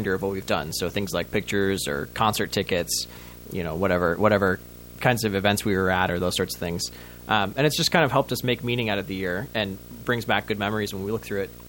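Throughout the speech runs a video or display buzz, a screen or video cable coupling into the audio. Its 59.94 Hz field-rate buzz, with hash above it and a 15.7 kHz line tone, sits around 20 dB below the speech. That line tone and the 59.94 Hz rate set it apart from mains hum.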